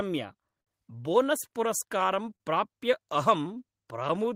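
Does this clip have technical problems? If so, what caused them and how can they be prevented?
Yes. Between 0.61 and 0.81 s the speech stalls briefly: one sound is held about 51 ms too long, and then carries on from where it stopped, so nothing is lost. This is a short stall from a late packet. The packet missed its playout time, the jitter buffer ran dry, and the receiver stretched the last sound until the packet arrived. The delay rose by 51 ms, and about 27 ms was later trimmed to catch up. A deeper jitter buffer or a steadier network path, for example with QoS priority for the audio, would absorb late packets like this one.

From 0.95 to 1.26 s the speech slows to about 90% speed at an unchanged pitch, so sounds are drawn out. This is a jitter buffer slow-down. Its reserve was low or its target delay had just been raised, so the receiver repeated single pitch periods several times in a row and added 38 ms to rebuild its margin. 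Setting a larger starting buffer target would avoid this quick refill.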